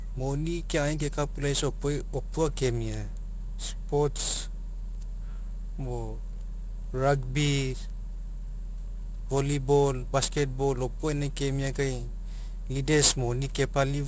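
Aliasing runs through the whole speech clip. The audio appears to have been resampled down, consistent with 16 kHz, without an anti-alias filter, so content above 8 kHz folds back sitting only about 10 dB down. Sibilants sound gritty and metallic, with energy packed to the band edge.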